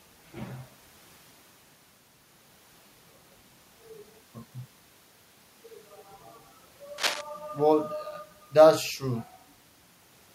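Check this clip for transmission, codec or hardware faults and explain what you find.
One hardware fault shows up in the speech: a short burst of cable scratch noise from 6.98 to 7.22 s. The likely cause is a worn cable, connector or control being moved, so its contact resistance jumps around rapidly and lets dense, irregular bursts of noise into the signal. For about a quarter of a second a rough scratching rustle sits over the speech, only a few decibels below it.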